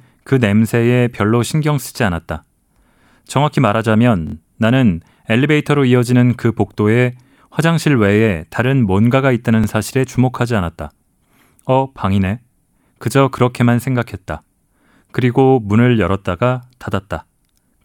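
At 4.27 s the speech catches on a repeated buffer: fresh audio didn't reach the device in time, so it replayed the last chunk, about 23 ms long, which fits a 1024-sample buffer. That slice sounds four times back to back with hard joins, giving a quick stutter through 4.34 s. It happens again at 9.64 s, this time a single extra play ending at 9.66 s, so the stutter is shorter. Neither spot seems to lose any audio.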